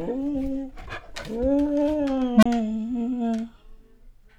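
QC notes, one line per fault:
2.35–2.46 s: unstable filter. A low tone around 200 Hz appears and swells sharply over about 72 ms. It clips. Then the output drops to silence for about 29 ms. A recursive filter has gone unstable here. Its feedback keeps amplifying its own output, so the level climbs without limit. The numbers finally overflow, and the filter resets. That produces the loud rising burst and the short gap after it.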